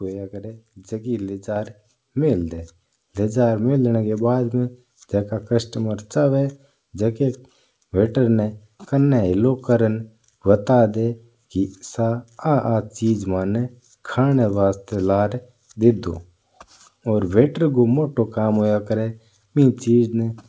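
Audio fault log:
1.56 s, microphone volume stepped up: voice and background jump together by about 5 dB in one step rather than a gradual ramp, as the input volume was raised.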